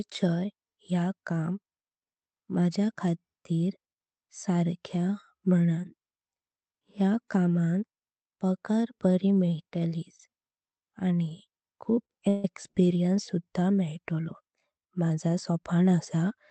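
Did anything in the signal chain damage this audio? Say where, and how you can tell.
Yes. Around 12.05 to 12.10 s, just before "एक्स्पीरियन्स सुद्धां", a sound is held about 41 ms too long with a faint buzz. This is a short stall from a late packet. The jitter buffer ran dry and the receiver stretched the last sound until it arrived, losing nothing.

From 12.28 to 12.45 s, also before "एक्स्पीरियन्स सुद्धां", the speech freezes into a fading buzz for about 155 ms without reaching silence, then resumes where it stopped. This is a call audio freeze, likely caused by packets held up on the network, inserting a gap rather than cutting anything.

From 15.02 to 16.31 s the speech runs hurried, about 107% speed, at unchanged pitch. This is a jitter buffer speed-up. The buffer was over its target, so the receiver trimmed pitch-period slices, roughly a tenth of a second in total, on this Opus call path with its 8 kHz bandwidth.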